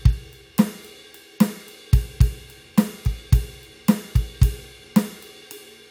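No technical faults can be heard anywhere in the music.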